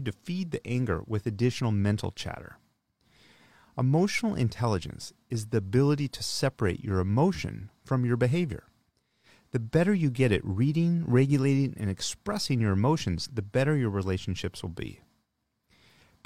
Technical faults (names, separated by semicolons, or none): none